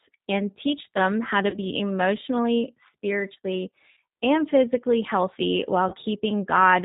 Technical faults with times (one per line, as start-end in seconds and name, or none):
0.00-6.84 G.729 codec
1.50-1.58 VoIP packet loss concealed by the speech codec
3.91-3.98 VoIP packet loss concealed by the speech codec
5.89-5.96 VoIP packet loss concealed by the speech codec